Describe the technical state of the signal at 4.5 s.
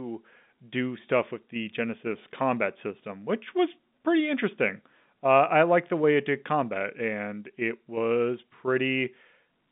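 At 4.5 s the audio is intact, with the speech passing through ordinary G.711 telephone coding and its narrow band of roughly 150 Hz to 3.6 kHz.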